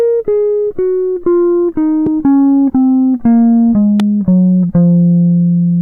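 At 2.06 to 2.09 s, a loud pop breaks through the music. Another follows at 4.00 to 4.02 s. Each is a single sharp click, roughly 10 dB above the music, which continues underneath. A brief electrical voltage pulse, likely from a plug, switch or static, is the cause.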